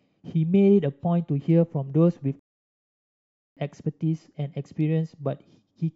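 A rebuffering stall interrupts this short speech recording: partway through, the player exhausted its downloaded audio and had to halt until more data arrived. The speech drops to silence at 2.39 s and picks up again at 3.57 s, resuming at exactly the point where it broke off, so nothing is skipped. The gap simply inserts about 1.17 s of dead air into the middle of the clip.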